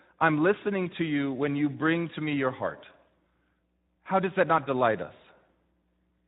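From start to end, the speech carries Speex codec damage: a plainly audible hoarse, noisy grain, which fits a bitrate near 11 kbps. Too few bits describe the excitation, so a spectrogram shows blurred, noise-filled harmonics rather than clean striations.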